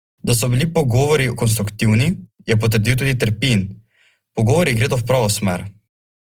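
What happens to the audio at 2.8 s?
At 2.8 s the speech has the grainy, rough texture heard throughout, likely from Opus compression at around 24 kbps. Starved bands are filled with noise or folded content rather than left empty, so it sounds noisy instead of MP3-style swirling, and still reaches about 20 kHz.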